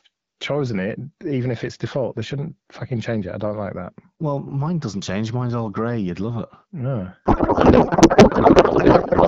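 A codec payload misread hits this speech clip from 7.26 s to the end: octet-aligned AMR-WB frames appear to be parsed as bandwidth-efficient, shifting every field. From that point the speech turns into garbled noise and warble that barely tracks it. Before 7.26 s, the AMR wideband coding sounds clear, with only light codec roughness.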